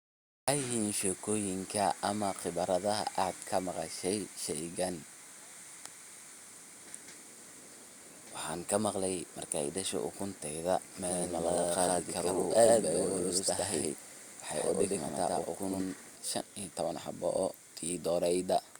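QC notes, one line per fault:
10.94–16.16 s, doubled audio track: an equally loud, dry copy trails about a tenth of a second behind, cutting in and out abruptly, likely from a slower second capture path.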